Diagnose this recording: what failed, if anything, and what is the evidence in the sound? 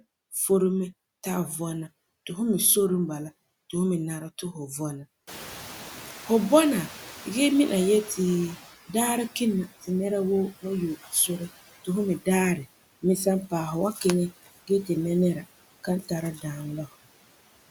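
Call processing stage: noise suppressor artifacts run throughout. The background is cut by about 15 dB. The residue sinks between phrases and rises under the speech.

Noise suppressor catching up, 5.27 to 8.71 s. Room noise jumps about 21 dB near 5.5 s. Its estimate lags, so reduction reaches only about 11 dB over 3.4 s.

Speech cut by the noise suppressor at 15.84 to 16.11 s and 16.35 to 16.44 s. Speech drops up to about 11 dB, treated as noise. Quiet parts sound swallowed.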